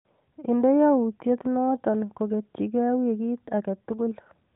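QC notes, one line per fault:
No fault lines to log for this speech clip.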